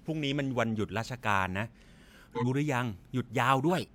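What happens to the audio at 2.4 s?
A corrupt frame was decoded: from 2.35 to 2.47 s, roughly two compressed frames arrived with flipped bits and were played anyway, so misread codes and gains threw energy into the wrong frequencies. The speech gives way to a short chirpy burst of noise peaking around -20 dBFS.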